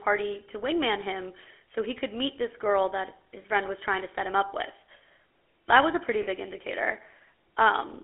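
Speech passed through a GSM full-rate codec, which fits the 13 kbps first-generation mobile coder, over a line band of about 300 Hz to 3.4 kHz. The vocal tract is modelled and driven by sparse, regularly spaced excitation pulses. The result is a plainly audible buzzy, gravelly roughness with a muffled, top-less tone. Lost GSM frames occur at 3.42 to 3.44 s, consistent with one dropped 20 ms frame, and at 6.22 to 6.27 s, consistent with two. Each gap is concealed by repeating the last good frame, so the sound briefly smears into a rough, metallic ring.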